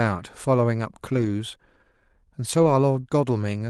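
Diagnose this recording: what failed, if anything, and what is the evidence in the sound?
The fault sits at the network stage: a lost packet was rebuilt from error correction, twice. At 1.13 to 1.27 s and again at 2.61 to 2.71 s the sound turns briefly rough and grainy but never drops out. Those stretches point to about four and three separate lost packets, covering 80 ms and 60 ms. The Opus decoder filled each one from the low-bitrate redundant copy carried in the following packet. On a spectrogram the harmonics there look smeared and the noise floor thickens, while the waveform stays continuous with no flat gap. The surrounding Opus call audio at 32 kbps, band-limited near 12 kHz, sets the reference those patches fall short of.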